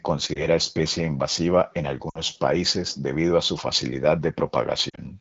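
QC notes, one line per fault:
0.34–0.47 s, lost AMR speech frames: a brief warble right before "especie invasiva en", from about 20 ms of missing audio. The decoder repeats the last pitch and spectral envelope at lowered gain, so the spectrogram shows a short smeared, repeated harmonic slice and the waveform a small envelope dip.
2.09–2.20 s, lost AMR speech frames: between "especie invasiva en" and "países debido a su", 60 ms is concealed. The sound drops to near silence within two frames as gain falls. Frozen harmonics thin out and the waveform tapers before a weak restart.
4.90–5.00 s, lost AMR speech frames: about 60 ms of losses are scattered over 100 ms, with the longest run 40 ms. This gives a stuttery flutter. The spectrogram shows broken, repeated stripes and the waveform two quick dips, laid over the light 12.65 kbit/s AMR-WB coding of the clip.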